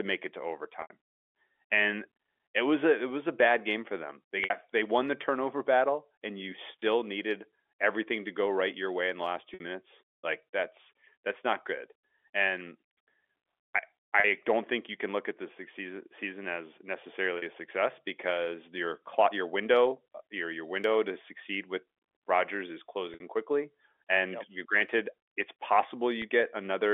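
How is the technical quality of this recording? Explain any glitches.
The recording has eight short dropouts from packet loss with pitch repetition, heard over telephone-band audio limited to roughly 300 Hz to 3.5 kHz.

The gaps fall at 0.82 s (80 ms), 4.44 s (60 ms), 6.80 s (20 ms), 9.54 s (60 ms), 14.20 s (40 ms), 17.38 s (40 ms), 23.14 s (60 ms) and 26.22 s (20 ms), which fits lost 20 ms packets. The receiver fills each gap by looping the last pitch cycle, so the short ones briefly hold with a buzzy, sustained quality, while the longer ones fade into silence before speech returns with a short cross-fade.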